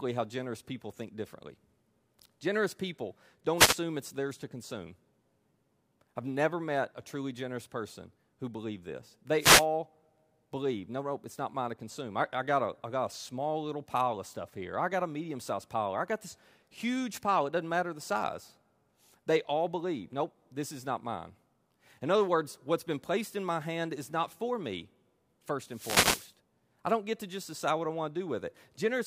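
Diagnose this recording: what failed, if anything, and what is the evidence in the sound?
Short bursts of static swish at 3.56–3.76 s before "it's theirs to consume", 9.38–9.66 s after "person who believed this", and 25.69–26.34 s before "I don't get to". These are wireless microphone noise hits: the analogue FM radio link fades as reflections cancel, so receiver noise surges over the speech.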